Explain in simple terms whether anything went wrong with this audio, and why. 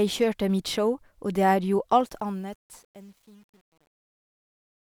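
Truncation distortion on a fade affects the second half of this speech recording. The fade-out starts around 2 seconds and ends at 4.93 s. From 1.97 s the fading sound turns gritty. From 2.46 s to the end the distortion is at its worst. The volume stage that made the fade kept too few bits, which fits a 9-bit stage, and added no dither. The quietest parts collapse into a few coarse square steps instead of a smooth waveform.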